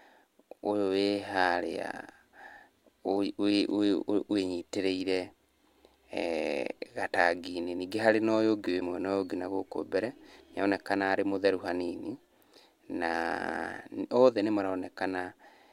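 At 8.79 to 8.82 s the speech skips forward with a brief glitch. This is likely a broken MP3 bit reservoir: after lost frames of about 26 ms each, the next frame reached back for borrowed data and found another frame's bytes.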